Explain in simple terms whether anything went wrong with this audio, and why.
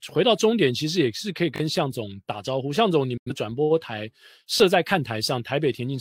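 Two kinds of fault can be heard in this speech.

The first is a repeated buffer, heard twice. From 1.56 to 1.6 s, a 20 ms slice of sound plays three times in a row. At 4.58 s the same thing happens once, with one extra play. New sound did not reach the playback device in time. So it replayed the last piece it had. Each repeat joins hard, giving a quick stutter or buzz. The sound that should have played there, roughly 40 ms and 20 ms, is gone.

The second is a digital broadcast dropout, from 3.17 to 3.31 s. The sound fades out over about 8 ms and goes silent, then comes back. The receiver lost good data and muted until clean data returned. About 85 ms of sound is missing, which fits two lost frames. Whatever was sent in that gap cannot be recovered.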